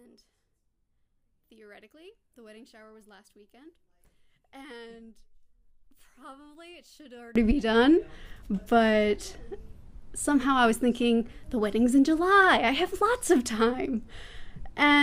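From 0.0 to 7.36 s the sound drops by about 27 dB and turns faint, its centred content and low end nearly gone. One channel inverted is the likely cause: material common to both channels cancels in mono, leaving only their faint difference.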